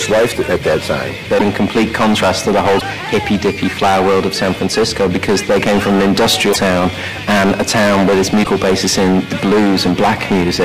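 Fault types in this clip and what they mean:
Hard clipping, throughout: the audio is pushed about 20 dB past what the chain can pass, so roughly a fifth of all samples are sliced flat at the ceiling. Those squared-off peaks add high harmonics, giving a constant harsh fuzz on every loud passage.
Broken MP3 bit reservoir, at 1.37–1.42, 2.78–2.83, 6.52–6.56 and 8.43–8.47 s: each spot is a brief glitch about 44 ms long where the sound skips forward. This is likely from MP3 frames of 26.1 ms going missing, so the following frames pull borrowed data from the wrong bytes.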